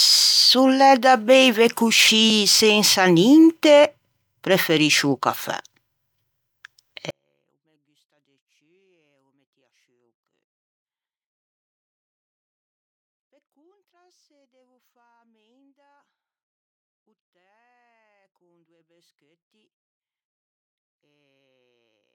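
At 7.10 s the speech suddenly drops about 48 dB and stays that faint to the end, still clean but barely audible. That's a 24-bit alignment error, too quiet: 24-bit samples sitting in the low bytes of a 32-bit word got read as full 32-bit values.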